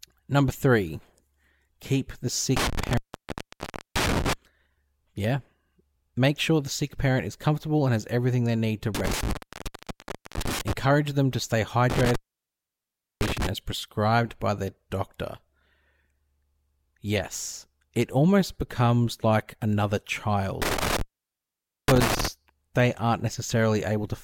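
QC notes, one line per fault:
2.57–4.33 s, 8.95–10.73 s, 11.9–13.47 s and 20.62–22.28 s, intermittent contact: a loose plug or cable conductor repeatedly breaks and remakes its connection. Each time, the line stays open for about 0.9 to 1.1 s and the speech drops out, with crackle where the contact scrapes open and closed and faint hiss in the gap. The first dropout comes just after "keep the", the third after "them to stay", ending before "as prescribed by their", and the last ends before "they aren't".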